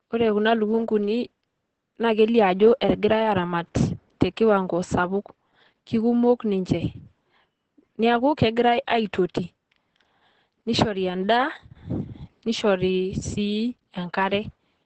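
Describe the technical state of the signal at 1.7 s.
At 1.7 s the speech carries Opus voice compression, which runs through the whole clip rather than starting at this moment. The codec is working in its SILK linear-prediction mode at wideband, so nothing is present above about 8.4 kHz. The excitation is coded coarsely, and the damage is heavy: the voice sounds muffled, hoarse and somewhat robotic. That degree of degradation fits a low bitrate of around 10 kbps.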